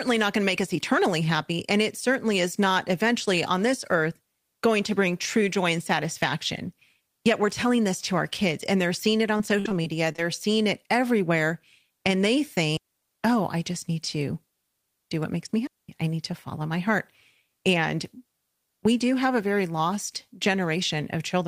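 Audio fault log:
9.37–10.2 s, repeated packet loss (robotic sound): Just after "and they're seeing it" and before "seeing it everywhere", the speech turns choppy. Six separate holes open in under a second, the longest about 56 ms. About 145 ms is papered over by stretching the preceding sound, which covers roughly 18% of the stretch, and about 160 ms simply goes missing. The holes come in quick succession, and each patch repeats stale sound, which gives the choppy, broken-up sound with pieces missing.
12.77–13.11 s and 15.67–15.89 s, digital wireless dropout: The audio falls to near silence twice, for about 340 ms just before "oh I just need" and for about 220 ms between "do what makes me" and "I need to follow". Each time the link lost more data than it could repair, so the receiver muted with a very brief fade rather than play corrupted sound. That gives a clean hole with no crackle or noise burst on either side.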